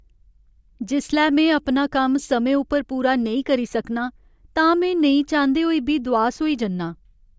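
Speech recording, with nothing technically wrong with it.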